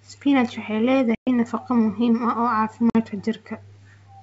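Packet loss on an ADPCM call cuts 120 ms at 1.15–1.29 s and 50 ms at 2.90–3.01 s. The lost audio becomes hard-edged silent gaps in the wideband G.722 speech, and the decoder's predictor drifts, leaving the returning speech briefly unsteady.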